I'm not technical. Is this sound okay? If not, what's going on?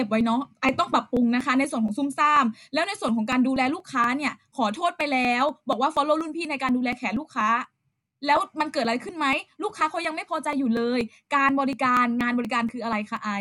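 No. Periodic USB or driver dropouts cause a regular tick in the speech about every quarter second from 0.21 s to 13.17 s. Each tick is a tiny skipped slice, roughly a hundredth of a second. The steady rhythm marks it as driver dropouts rather than random glitches.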